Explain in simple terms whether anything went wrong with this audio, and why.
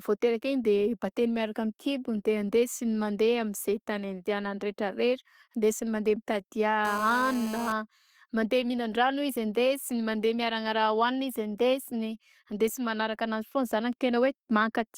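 GSM phone buzz: a nearby phone on a call sent radio pulses 217 times a second, leaking a raspy buzz into the speech from 6.85 to 7.72 s.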